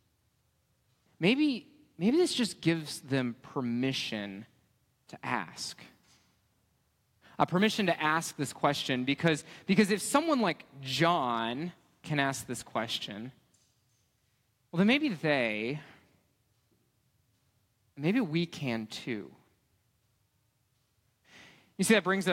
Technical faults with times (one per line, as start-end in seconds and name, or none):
7.41-7.43 hard clipping
9.27 hard clipping
9.79-10.16 hard clipping
11.04 hard clipping
21.91-21.98 hard clipping